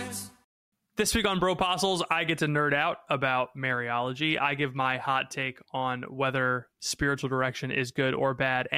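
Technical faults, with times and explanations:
No technical faults can be heard anywhere in the audio.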